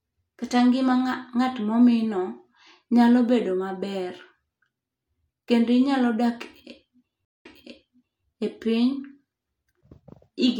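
At 7.25 s the speech drops into a stream reconnect: about 0.16 s of silence while the connection is re-established, then a fresh decoder resumes 0.84 s earlier, replaying speech already heard until 8.25 s. That repetition separates it from a plain dropout, which would simply lose audio.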